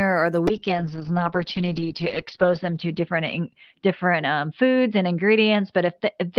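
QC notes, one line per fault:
0.5–6.38 s: call bitrate drop. The encoder rate falls from 32 to 7 kbps, holding its lowest point for 1.87 s. Coarser coding makes the speech rough and watery, and bandwidth narrows from 20 kHz to 6 kHz, muffling it. It does not recover before the end.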